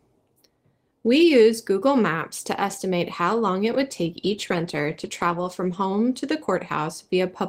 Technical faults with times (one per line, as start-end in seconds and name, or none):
3.73-5.93 call bitrate drop